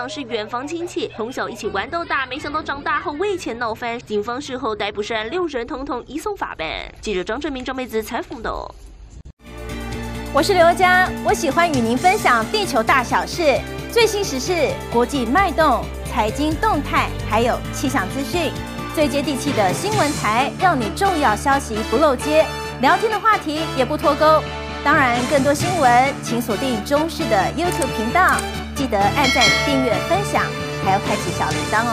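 Three single sharp clicks sit at 19.23 s, 21.08 s and 31.15 s. Each is most likely dropped samples: a fraction of a millisecond is missing, so the waveform jumps abruptly to a later value. Nothing audible is removed, only a brief broadband tick.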